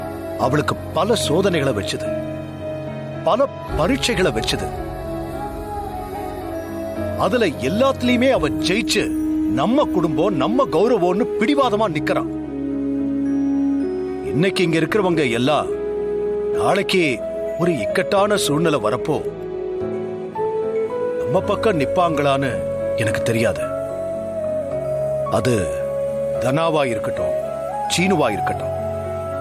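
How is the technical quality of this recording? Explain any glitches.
No glitches or dropouts are audible anywhere in the recording, so there is nothing to explain.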